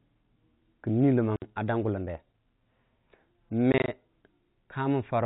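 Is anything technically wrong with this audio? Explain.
Yes, there is packet loss filled with silence, heard at two points in this telephone-band speech. From 1.36 to 1.42 s there is one 60 ms hole, which fits three consecutive 20 ms packets going missing. From 3.72 to 3.88 s, 80 ms of audio drops out as several separate gaps spread over 160 ms, none longer than 20 ms. In each case the receiver put silence where the missing packets should have been. The sound cuts off and resumes abruptly, with hard edges. This sets it apart from concealed loss, where the gap would be bridged with repeated or smoothed sound. The G.711 coding accounts for the lack of anything above 4 kHz, and that is the format working as designed, not a fault.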